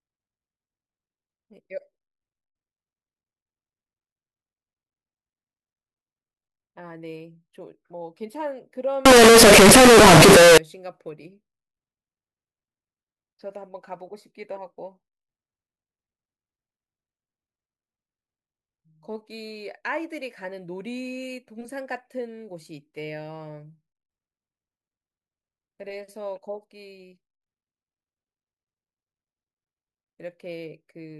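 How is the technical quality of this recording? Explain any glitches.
The recording has one serious glitch, a burst of harsh distortion from 9.06 to 10.58 s. That stretch sounds like signed and unsigned mixed up. The likely cause is 16-bit samples being read with the wrong sign convention, so the top bit flips and every zero crossing jumps across the full range. The result is a loud, rasping roar. Ordinary clipping or overload leaves soft moments soft, but here even the quiet gaps in the speech come out as loud as everything else.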